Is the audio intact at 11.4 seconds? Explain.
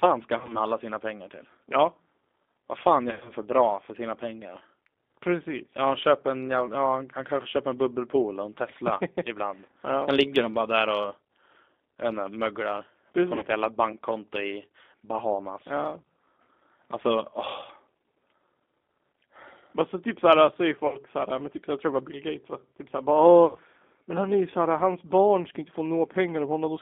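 No. Throughout the clip, 11.4 s included, G.729 codec coding rebuilds speech from a vocal tract model and sparse pulses, so it sounds rough, synthetic and confined to 250 Hz to 3.6 kHz.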